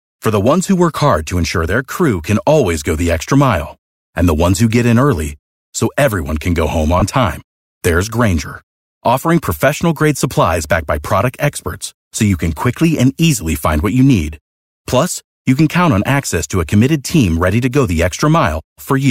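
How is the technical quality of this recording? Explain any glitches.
One real glitch here, with the light lossy compression on the speech barely noticeable. Between 7.00 and 7.02 s, right after "everyone can go home" and before "time there's", there's a burst of lost LE Audio frames, about 20 ms, which fits two 10 ms frames. The LC3 decoder filled the gap by replaying the last spectrum with scrambled signs, so you hear a brief noisy smear.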